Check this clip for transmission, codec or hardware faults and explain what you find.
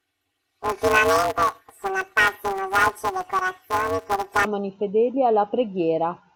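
There's one fault here. From 0 to 4.45 s, planar audio read as interleaved: each 5.33 ms block, fitting a 256-sample block, gets replayed as alternating pairs, giving a robotic buzz around 188 Hz over the speech.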